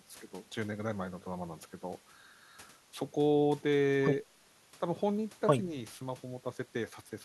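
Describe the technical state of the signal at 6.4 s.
At 6.4 s the speech signal is intact, with no dropout, clipping, distortion or other fault audible at that moment.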